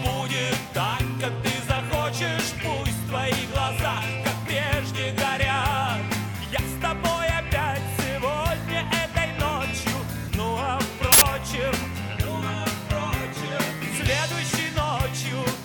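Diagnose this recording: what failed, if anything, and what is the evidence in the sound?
The failure is at the driver or buffer stage: an uninitialised buffer was played before any audio had been written to it, so stale memory contents went out as samples. The result is a burst of digital noise from 11.12 to 11.22 s, about 93 ms, which fits one 4096-sample block.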